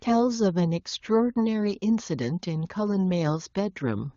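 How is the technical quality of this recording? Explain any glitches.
No faults are audible anywhere in this speech.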